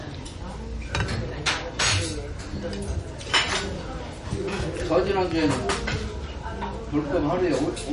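From start to finish the audio carries plainly audible damage of the kind MP3 compression leaves, most likely from an encoder short of bits. Nothing sounds above about 10.6 kHz, a cutoff that fits a low bitrate near 40 kbps. Weak frequency components flicker in and out between frames, giving a watery, swirling texture and smeared attacks. That flicker is what separates it from a simple low-pass filter, which would dull the treble but leave the remaining sound steady.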